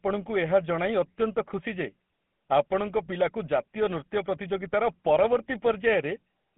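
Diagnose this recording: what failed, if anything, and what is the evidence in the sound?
The codec stage failed: the speech carries GSM full-rate codec damage from start to finish, with a plainly audible buzzy, gravelly roughness over a 150 Hz to 3.4 kHz band, which fits the 13 kbps full-rate coder. A plain telephone-band filter would narrow the sound but leave it smooth. This texture comes from a pulse-driven vocal-tract model that keeps only every third excitation sample.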